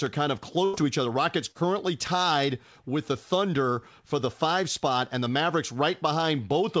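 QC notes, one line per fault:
0.65–0.76 s, burst of packet loss: after "are kind of", a run of packets was lost or arrived too late to play. The receiver stretched the last sound for about 84 ms, fading it into a held buzz or hiss. Playback then resumes at "to each other", with roughly 90 ms of speech skipped.
1.51–1.57 s, short concealed packet loss: just before "tied with the", about 30 ms of audio failed to reach the decoder in time. The receiver bridged the hole with 32 ms synthesized from the preceding sound, then crossfaded back, leaving a brief smear in the band-limited call audio, which has nothing above 8 kHz.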